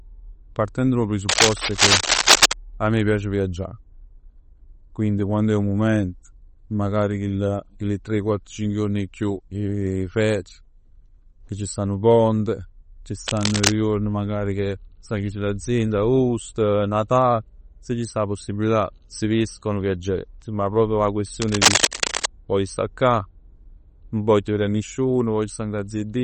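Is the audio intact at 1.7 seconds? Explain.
No. Cable scratch noise runs from 1.29 to 2.54 s, covering the asked moment. The likely cause is a worn cable, connector or control being moved, so its contact resistance jumps about rapidly and injects dense, irregular bursts of noise. At 1.7 s this is heard as a rough scratching and rustling laid over the speech, at times somewhat louder than the speech itself.

MP3 compression also affects this moment, as it does the whole clip. The damage is plainly audible and fits a low bitrate of around 32 kbps, likely from the encoder running short of bits. It zeroes weak frequency lines, which then flicker on and off between frames, giving a watery, swirly texture with metallic chirps on s sounds and smeared attacks. Nothing is present above 21 kHz.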